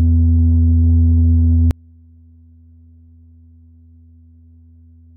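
From 1.71 s to the end, the music collapses when summed to mono, dropping about 33 dB. Most likely one channel is inverted, so the material common to both channels cancels. Centred parts and bass largely disappear, leaving only a faint residue of the channel difference.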